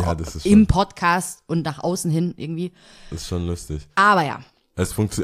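Nothing in the recording gives itself away as a fault: no dropouts, clicks, glitches or distortion turn up anywhere in the speech.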